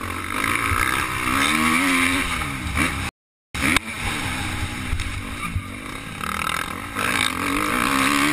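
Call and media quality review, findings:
Rebuffering stall, 3.09 to 3.55 s. Audio drops to silence for about 0.46 s, then resumes at the exact point it stopped. No content skipped, no repeat. Component: playback client buffer. Mechanism: buffer underrun. Player exhausted downloaded audio, halted output, waited for more data. Net effect is 456 ms of time added to the timeline. Suspect delivery falling behind playback rate.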